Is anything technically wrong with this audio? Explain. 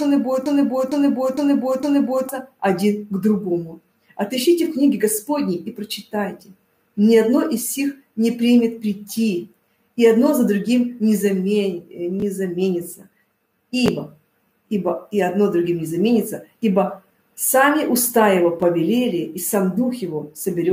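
Yes. From 0.46 s to 2.29 s there is a broken-record loop: a 457 ms fragment plays four times in a row, identical each pass, with no change between repetitions. The likely cause is a stall in the player, encoder or stream, which kept resending the last fragment it held instead of new audio. The result is a stuttering, mechanical repetition, and whatever should have played during those 1.8 seconds is missing from the clip.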